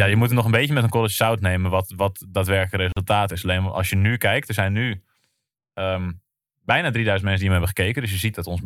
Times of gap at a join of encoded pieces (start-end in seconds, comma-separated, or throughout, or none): 2.92-2.97